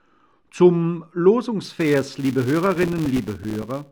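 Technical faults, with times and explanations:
1.65 to 3.91 s, filter restarted on every block: From 1.65 s to the end, a steady 200 Hz buzz rides on the sound. A filter is losing its memory between processing blocks and starting each one from zero. Every block therefore opens with a small transient, and these transients repeat 200 times a second, which fits blocks about 5 ms long. The buzz rises and falls with the level of the sound because each transient scales with the signal.
2.66 to 3.63 s, processor overload crackle: For about a second, a gritty crackle tears through the sound on top of the buzz. The processor falls behind and misses deadline after deadline for its short audio buffers. Each missed buffer is filled with silence, so the sound is chopped by many tiny dropouts with hard edges. The spacing points to buffers of around 3 ms, with some thirty of them lost. The crackle stops at 3.63 s, once the load eases.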